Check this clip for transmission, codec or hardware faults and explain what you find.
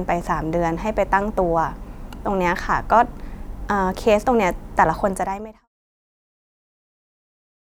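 No faults detected.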